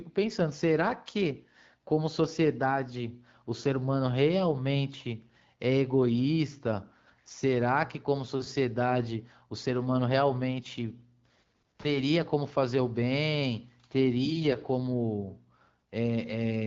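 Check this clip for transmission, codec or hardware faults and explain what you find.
Nothing stood out on listening to this speech clip that would point to a transmission, codec or hardware problem.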